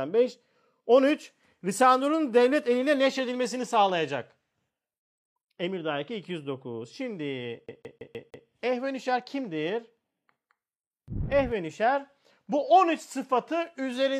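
At about 7.66 s the speech gets caught in a CD stuck on one turn: a roughly 160 ms slice repeats five times until 8.47 s, each pass broken by a tiny mute as the laser jumps back a track, giving that quick, even skipping-disc stutter.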